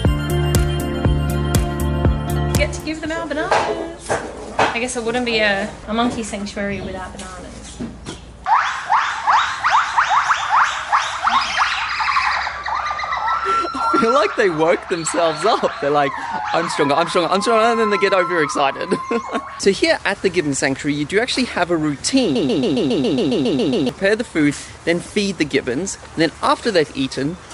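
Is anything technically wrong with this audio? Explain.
Yes. From 22.36 to 23.89 s there is a broken-record loop: a 137 ms fragment repeats 11 times back to back. The likely cause is a stalled player or stream resending its last held fragment, so the audio due in that span is lost.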